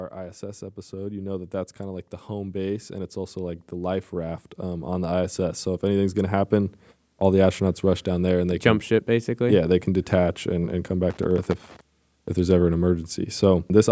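From 0.15 s to 7.58 s the speech and the background noise swell together by about 13 dB. That slow climb is automatic gain rising: the gain control judged the input too quiet and kept pushing its gain up over several seconds. Because the amplification applies to everything, the noise floor rises with the voice. On a waveform the envelope widens steadily across that span, and a spectrogram shows the whole band, including the gaps between words, brightening together.

At 11.10 s a loose connector crackle breaks in and lasts about 0.7 s, until 11.81 s. A worn or dirty contact is making and losing connection in rapid, uneven succession, chopping the signal and throwing in pops wherever a DC offset jumps. It sounds like an irregular scratchy burst. The waveform shows jagged gaps and sharp spikes, and the spectrogram shows scattered vertical streaks running up to the 8 kHz ceiling that the call's microphone processing sets on the band.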